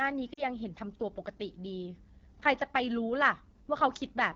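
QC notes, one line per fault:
Throughout: AMR wideband (HD Voice) codec. The whole thing has that rough, raspy grain you get when the pitch-pulse model is starved of bits, which fits the 8.85 kbit/s mode, one of the two lowest. The top band above 6.4 kHz is just shaped noise, and the damage is plainly audible.
0.33 to 0.44 s: lost AMR speech frames. About 40 ms of coded speech went missing, likely a couple of frames failing their checksum, so the decoder repeated the last good pitch and vocal tract settings at falling gain. The sound drops to near silence within the two frames, then recovers a bit roughly.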